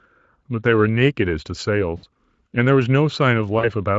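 VoIP packet loss concealed by the speech codec hits this speech recording at 1.97 to 2.05 s and again at 3.59 to 3.69 s. The gaps are about 60 ms and 40 ms, which fits three and two lost 20 ms frames. The decoder fills each gap by stretching its last pitch and filter state while lowering the gain, so the sound smears into a fading buzzy tone or coloured noise. The Speex coding of the surrounding audio shows at most faint damage.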